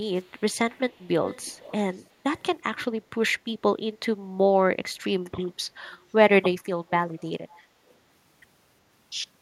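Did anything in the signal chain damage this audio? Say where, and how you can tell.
Yes, in call processing: an echo leak. A faint copy of the speech trails 369 ms behind at 0.16–1.08, 1.24–1.72, 1.92–2.05, 2.37–2.44, 2.75–2.84, 5.9–5.98, 7.5–7.6 and 7.88–7.94 s, peaking at about 15 dB down. Likely an echo canceller letting loudspeaker pickup slip back.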